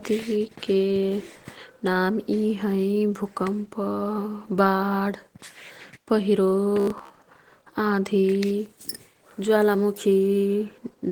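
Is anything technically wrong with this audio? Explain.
Yes, there are two problems.

Opus voice compression runs through the whole clip, and its damage is plainly audible. The speech has the muffled, slightly hoarse and faintly robotic texture of Opus at a low voice setting, roughly 16 kbps. The coder appears to be in hybrid mode: a linear-prediction layer carries the speech body and a coarse transform layer adds the top. The band is not narrowed; it stays fullband. So the dullness comes from coarse coding of the excitation, not from a lost treble.

From 6.80 to 7.13 s the speech turns into a rigid, metallic buzz at 66.8 Hz that still loosely tracks the speech. This is robotic sound from repeated short buffers. The likely cause is audio arriving too seldom, so the player loops the last chunk while real audio is skipped. About half this stretch seems to be repeats. The 66.8 Hz pitch fits a buffer of roughly 15 ms. 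Unlike the codec roughness, this buzz holds one fixed pitch.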